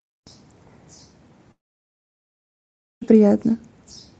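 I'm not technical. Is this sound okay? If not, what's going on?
No. At 1.51 s the speech cuts out. For a moment the last sound trails off as a fading buzz, then there is near silence until the speech returns at 3.15 s, with everything in that gap of about one and a half seconds lost. This is likely a long network dropout: the audio stopped arriving, the receiving end briefly stretched the last bit of sound, then went quiet until audio reached it again.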